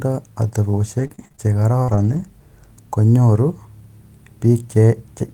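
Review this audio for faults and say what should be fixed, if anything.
From 0.99 to 2.18 s there's a stretch of repeated packet loss that gives the speech a choppy, robotic edge. Six short holes turn up in that span, the longest about 46 ms, and each one gets papered over by stretching the last bit of sound, so the fills pile up one after another. Around 12% of that stretch is concealed, and something like a third of a second of the speech is rebuilt. A bigger jitter buffer, or a more reliable network path with some forward error correction, should stop this from happening again.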